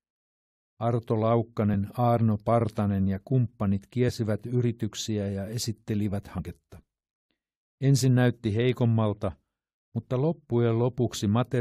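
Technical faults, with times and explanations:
1.73 s, 4.08–4.10 s and 6.37–6.39 s, compressed frames skipped: the speech jumps ahead as whole 23.2 ms codec frames go unplayed, losing roughly 20 ms at 1.73 s, about 50 ms between "ja kumppanit" and "yrityksiä ja esittelivät", and around 100 ms just after "yrityksiä ja esittelivät". Because overlapping frames blend across each join, each jump sounds like a short smeared blip rather than a click. A spectrogram shows harmonics abruptly displaced at each seam, with a faint smudge instead of a sharp vertical line, and the waveform splices without a gap.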